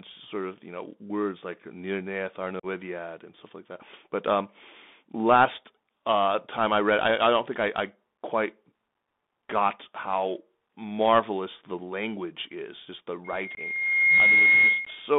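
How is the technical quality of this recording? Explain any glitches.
Pretty rough: it's a Bluetooth headset call with audible codec damage the whole way through, three dropouts, and a feedback squeal at the end.

The Bluetooth CVSD headset codec is on for the whole 15 seconds. The band runs only from about 200 Hz to 3.6 kHz, which fits a 64 kbps CVSD link. Its one-bit up/down coding can't keep pace with sharp, loud detail, so s sounds come out scratchy over a grainy hiss.

Unconcealed Bluetooth headset packet loss shows up three times: 2.60 to 2.66 s (37.5 ms), 13.55 to 13.59 s (22.5 ms) and 14.85 s (15 ms). Each gap fits a few lost radio packets filled with silence, so you hear a clipped hole with an abrupt edge.

The loudspeaker feedback squeal runs from 13.24 to 15.13 s. A 2.1 kHz tone swells over about a second until it sits well above the speech. That's the mic hearing its own speaker, with the loop gain running past one at that pitch.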